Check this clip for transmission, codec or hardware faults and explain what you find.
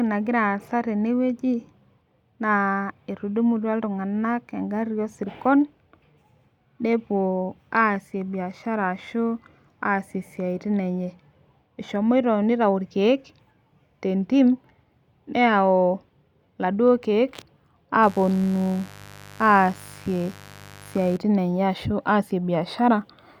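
One hardware fault is present: mains buzz from 18.03 to 21.17 s. A 50 Hz supply spikes twice per cycle, spraying harmonics into the kilohertz range, so a raspy buzz sits roughly 20 dB under the speech. Unlike smooth hum, it sounds bright and gritty.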